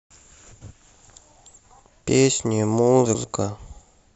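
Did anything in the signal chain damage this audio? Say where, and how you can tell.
Yes: frames out of order in the network stage. At 0.52–0.72 s and 3.05–3.24 s, two adjacent 93 ms blocks play swapped, giving garbled flutter.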